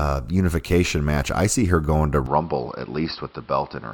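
At 2.26 s, after "see her going to", the input likely switched to a poorer device: speech turns dull with nothing above 5.5 kHz, somewhat quieter, with faint new background noise.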